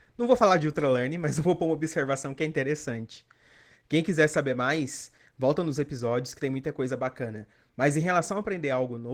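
Speech with Opus voice compression throughout: a hoarse, slightly robotic low band, blotchy sparse energy above 8 kHz on a spectrogram, consistent with hybrid coding near 16 kbps.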